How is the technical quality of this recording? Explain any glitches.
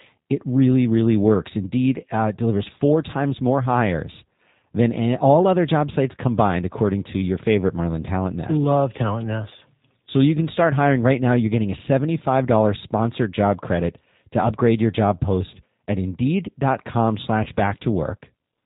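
The recording has two problems: plainly audible low-bitrate codec coloration throughout and one brief dropout near the end.

Throughout, the speech has passed through the G.729 codec. The sound fits its 8 kbit/s mode, which models the voice as a filter plus pitch and a few pulses, and it discards everything above 4 kHz. The damage is plainly audible: a dull, slightly rough, synthetic quality.

From about 17.44 to 17.49 s there is VoIP packet loss concealed by the speech codec. Roughly 20 ms of audio, consistent with a single lost packet, went missing. The decoder filled the gap by extending its last pitch and filter at falling gain, so that moment turns briefly stretched and weakened before normal sound returns.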